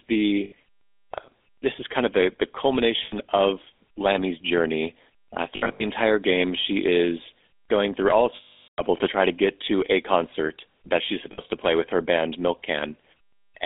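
Across the whole recording the speech carries the buzzy, gravelly roughness of the GSM full-rate codec. That damage is plainly audible and fits a 13 kbit/s GSM full-rate stream. The codec models the vocal tract and drives it with a coarse pulse excitation, which gives the voice its grainy texture. The line passes only about 250 Hz to 3.6 kHz. On a spectrogram, energy stops sharply near 3.6 kHz and is thin below 250 Hz, with blurred harmonics.

Lost GSM frames occur at 0.44 s (80 ms), 3.04 s (80 ms), between 5.56 and 5.83 s, at 8.36 s (420 ms) and at 11.32 s (60 ms). In the 5.56 s stretch, about 180 ms goes missing, scattered over 240 ms, with the longest gap roughly 70 ms. In each gap the decoder repeats the last good frame's settings, so the sound hangs on as a rough metallic ring. A spectrogram shows frozen horizontal bands in those gaps, and the waveform shows a repetitive stretch.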